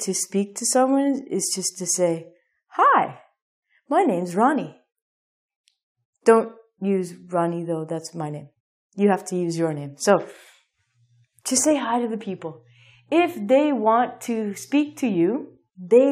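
No faults are audible anywhere in the recording.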